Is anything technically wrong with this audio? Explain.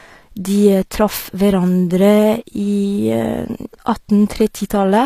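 Yes. Throughout the speech, the treble has likely been regenerated by HE-AAC compression at a rate that sounds like roughly 24 kbps. The coder keeps only the lower spectrum and synthesises the top band by copying lower bands upward under a coarse envelope, so the highs are present but are not the original. Harmonics fail to line up across the crossover, s sounds come out gritty and metallic, and nothing is present above about 14.9 kHz.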